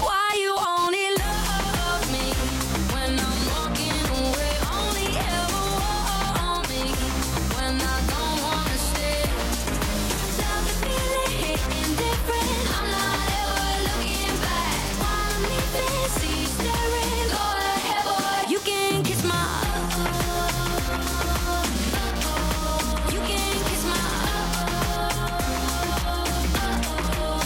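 Computer activity noise runs throughout. A buzzy, chirping pattern, pulsing at around 200 Hz and about 10 dB below the sound, follows processor or mouse load through shared ground.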